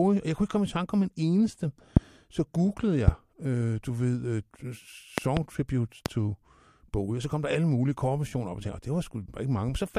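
Sharp loud pops cut over the speech at 1.97–1.99 s after "tanke om en eneste", 3.08–3.10 s before "øh du ved", a double pop at 5.18–5.39 s, and 6.06–6.08 s, each far louder than the speech. These are likely voltage spikes from a switch, static or driver glitch.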